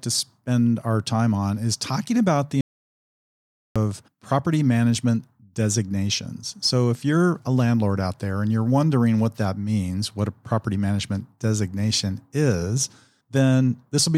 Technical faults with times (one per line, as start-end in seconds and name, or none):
2.61-3.76 audio dropout to silence